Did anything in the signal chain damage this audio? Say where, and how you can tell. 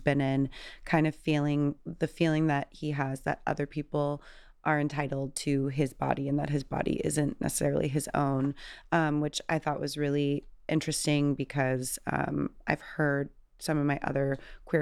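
No, nothing in the signal chain audibly damaged this speech recording. No stage, from the analogue wiring through to playback, leaves a mark that can be heard anywhere in the audio.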